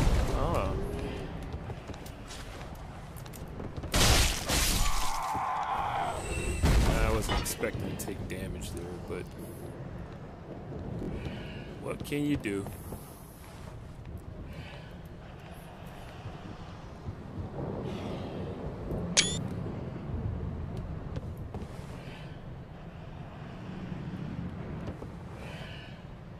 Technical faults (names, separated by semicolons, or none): repeated buffer